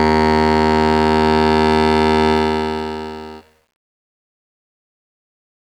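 From 2.30 s the music fades out, ending at 5.76 s. Under that fade there is truncation distortion. The gain stage keeps too few bits and adds no dither, which fits a 10-bit path. As the level drops, the waveform collapses onto coarse square steps. From 3.46 s to the end it is worst: the tail turns rough.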